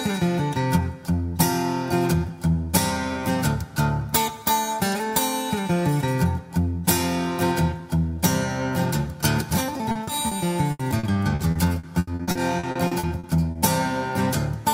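Three short concealed packet losses at 9.91, 10.03 and 10.27 s each leave roughly 40 ms of the audio patched by extending the preceding sound, heard as brief smears. On a spectrogram each shows as smoothed, stretched harmonics or flat noise breaking the natural detail. From 10.71 to 13.58 s, repeated packet loss produces a choppy, robotic stretch: fifteen separate holes, the longest 80 ms, together fill about a quarter of that span with synthesized continuation. The waveform shows recurring unnaturally regular segments, and the spectrogram shows smeared, buzzy harmonic bands.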